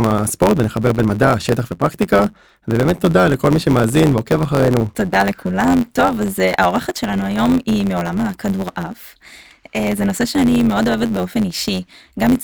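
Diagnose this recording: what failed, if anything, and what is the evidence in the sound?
A block size mismatch (truncated) at the driver or buffer stage runs through the whole speech clip. A steady 91.9 Hz buzz sits under everything, and the speech plays about 1.07 times fast at normal pitch, which fits 512-sample blocks written but with the tail of each dropped.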